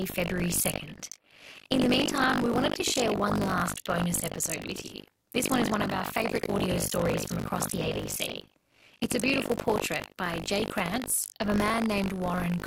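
From start to end the speech carries buffer tearing: a robotic 50 Hz rattle that stops in pauses, unlike mains hum. Writer and reader cross inside each 20 ms period, so roughly a fifth of each holds audio about 70 ms stale, hard-spliced in.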